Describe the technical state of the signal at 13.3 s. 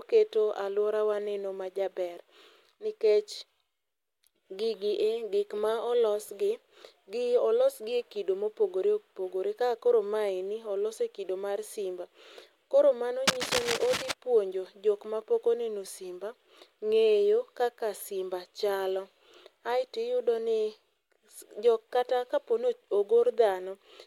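At 13.3 s the signal is in the middle of a burst of cable scratch noise. Most likely a worn cable, connector or control is being moved, so its contact resistance jumps about rapidly and injects dense, irregular noise into the line. It runs from 13.27 to 14.12 s, not far below the level of the speech, and is heard as a rough scratching and rustling laid over the sound, clearing just before "puonjo jok ma pok".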